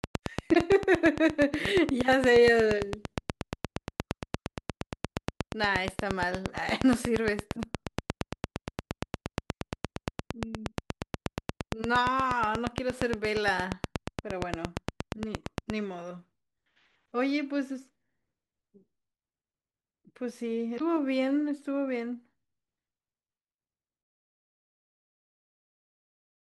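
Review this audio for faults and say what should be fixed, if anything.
A regular ticking runs over the speech from 0.04 to 15.71 s, about 8.6 clicks per second, roughly 150 in all, peaking around 15 dB above the signal and audible through pauses. This train of clicks is likely interference, a faulty connection or power supply injecting near-identical pulses. Shielding cables, separating them from noisy equipment and checking the interface's clocking and drivers should stop it.

Brief blips, each about 56 ms long, occur at 0.51 to 0.57 s and at 20.76 to 20.81 s. This is damaged data in a compressed stream: corrupted frames make the decoder lose sync and skip ahead to the next valid frame header. Verifying file integrity and using a transport with error checking would prevent it.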